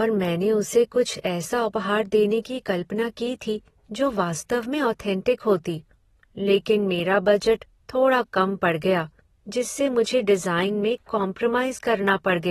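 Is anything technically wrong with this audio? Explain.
Yes. Throughout the speech, the sound is dull and smeared, with nothing above 13.8 kHz and a warbling, fizzy texture on sibilants. This is likely AAC compression: AAC-LC quantised the spectrum coarsely and lowered its cut-off, which fits a low bitrate near 24 kbps.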